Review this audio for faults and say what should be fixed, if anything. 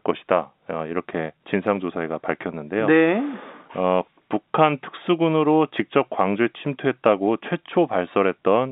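Nothing to fix: the speech sits in a telephone band of roughly 200 Hz to 3.7 kHz, consistent with G.711 telephone coding at 64 kbps, and no faults are present.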